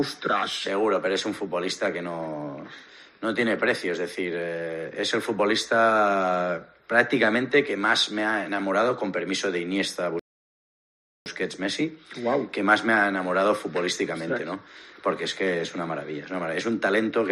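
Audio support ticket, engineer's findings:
Rebuffering stall, 10.19–11.26 s: playback drops to silence for 1.07 s, then resumes where it stopped. Player buffer underrun. Waveform flatlines; spectrogram shows a blank vertical gap, no content lost.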